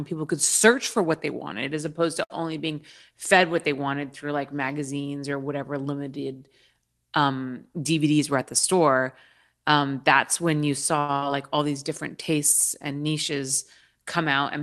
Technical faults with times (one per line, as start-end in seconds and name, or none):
2.23-2.32 short stall from a late packet
8.04-9.02 jitter buffer speed-up
10.99-11.15 short stall from a late packet
11.16-11.24 burst of packet loss